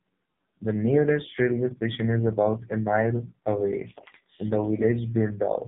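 AMR narrowband mobile codec damage runs through the whole clip. The speech is rebuilt from a vocal-tract model and sparse pulses, sounding heavily buzzy and synthetic, which fits the lowest 4.75 kbps mode. Nothing passes above about 3.8 kHz.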